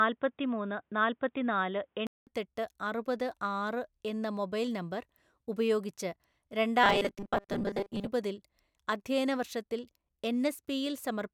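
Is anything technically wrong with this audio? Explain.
Yes, there are two faults.

From 0.0 to 2.27 s, the speech sounds dull and boxy. A faint new noise floor sits well below it, with no real level jump. A 200 ms gap marks the change. The input likely switched to a poorer device.

From 6.84 to 8.09 s, the speech becomes a rigid, metallic buzz at 200 Hz. This is robotic sound from repeated short buffers, likely about 5 ms long. Most of that stretch is repeats, and the real audio in between is skipped.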